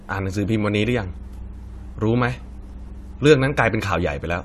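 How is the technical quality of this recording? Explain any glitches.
The recording is compromised by one fault, mains hum, from 0.84 to 3.70 s. A ground loop or nearby transformer couples the 60 Hz power line into the signal, adding a steady low tone roughly 15 dB below the speech. A spectrogram shows a constant horizontal line at 60 Hz across that span.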